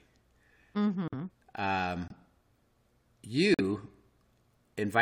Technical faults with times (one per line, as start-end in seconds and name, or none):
1.08-1.14 corrupt frame muted
2.08-2.11 corrupt frame muted
3.54-3.61 corrupt frame muted